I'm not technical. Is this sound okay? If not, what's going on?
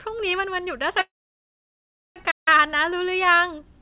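No. Around 1.01 s the call's audio data was likely held up on the way, so the receiving end ran out. It briefly drew out the last sound, then went silent for about 1.07 s until 2.19 s. This is a call audio freeze: the speech picks up where it stopped, so it's delayed rather than lost.

Shortly after, from 2.31 to 2.48 s, the player likely ran short of data or got stuck for a moment. The sound cuts out mid-flow for about 0.16 s and then carries on. This is a playback stall.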